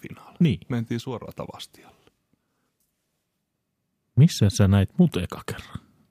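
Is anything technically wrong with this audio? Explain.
Yes. From 1.01 to 1.26 s the speech drops abruptly by about 6 dB and then snaps back, likely because one stereo channel dropped out and only half the mono sum remained. Unlike a full dropout, the sound never goes silent, and the step is sudden, not a gradual gain fade.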